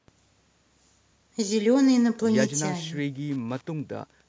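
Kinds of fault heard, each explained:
Wi-Fi interference: From 1.81 s to the end, a steady ticking repeats about ten times a second, matching a 102.4 ms beacon. A nearby Wi-Fi radio's bursts are being rectified by the audio circuit. The ticks sit low, about 40 dB below the speech.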